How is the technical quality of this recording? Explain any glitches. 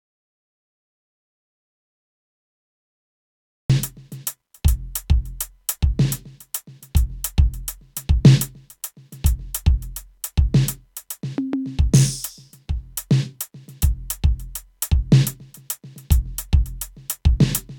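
The recording has one clear glitch: an audio dropout to silence at the very start. From 0.0 to 3.7 s there is nothing at all. The silence is already under way when the clip begins. It is dead silence, with no room tone or hiss beneath it. The music then cuts in abruptly mid-flow. The likely cause is a lost input, such as a disconnected device, a failed link or a mute, while the recorder kept writing silence. Whatever played during that gap is gone.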